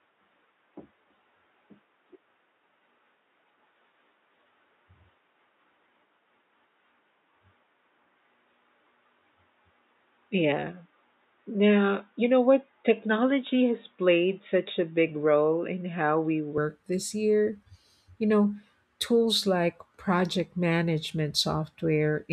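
Until 16.58 s, before "this year", speech is dull and boxy, the spectrogram empty above 3.8 kHz: likely an input switched to a poorer device.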